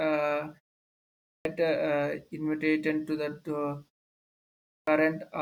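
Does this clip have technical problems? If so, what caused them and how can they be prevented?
Yes, there's a clipped start after a pause, twice: at 0.91 to 1.45 s after a 0.39 s gap, and at 4.25 to 4.87 s after a 0.43 s gap. The output device dozes off in silence and needs about 0.54 to 0.62 s to wake, so the speech cuts in abruptly, missing its opening. Keeping the device awake through silence, or turning off its power saving, prevents it.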